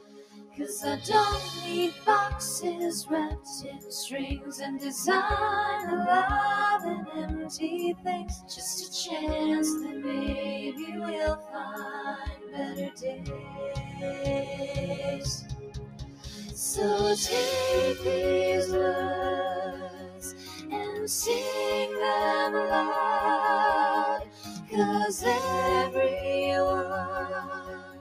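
A noise suppressor applied to music or sounds is active throughout, misreading steady tones and tails as noise, so the level swings by around 10 dB, pumping while attacks pass. Sound cut by the noise suppressor is heard at 0.0–0.63 s, 1.92–2.07 s, 3.03–4.55 s, 7.06–8.55 s, 10.8–16.58 s, 19.66–20.73 s, 24.18–24.74 s and 27.41–28.01 s, where held material sinks by about 8 to 14 dB and decays are cut short.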